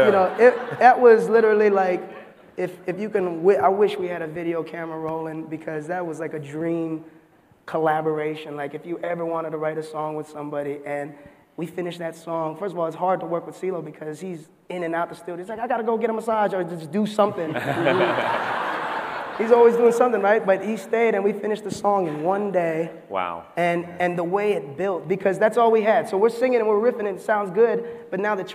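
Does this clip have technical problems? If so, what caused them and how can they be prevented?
No, the signal comes through intact, with nothing in the recording or transmission chain disturbing it at any point.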